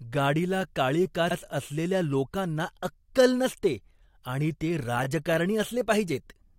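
Speech with two repeated-frames stutters: a 64 ms block at 1.30–1.36 s plays twice, consistent with three compressed frames sent again, and a 21 ms block at 5.03–5.06 s repeats once, suggesting a single frame. Each repeat lengthens the audio by its block duration.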